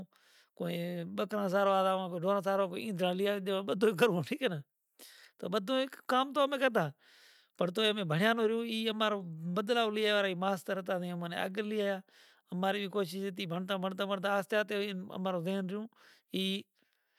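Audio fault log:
No technical faults can be heard anywhere in the recording; the speech signal stays steady and intact throughout.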